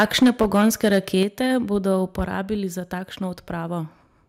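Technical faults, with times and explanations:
0.00–1.23 s and 2.19–2.21 s, microphone overload: the input level was likely set too high for the converter, so peaks ran into its ceiling, about 6 dB over in the opening stretch and about 3 dB over at 2.2 s. Their tops are flattened, a few percent of samples in the first span and a larger share in the brief second burst, which gives the loudest speech a harsh, crackling, gritty edge.
0.23 s, 1.23 s and 2.25 s, microphone volume stepped down: each time the system, likely reacting to the clipped peaks, lowered the microphone's input gain in a single jump of about 2 dB, then about 4 dB, then about 3 dB. Speech and background drop together at once rather than fading. The 1.23 s step coincides with the end of the long overload, and the 2.25 s step comes just after the short one.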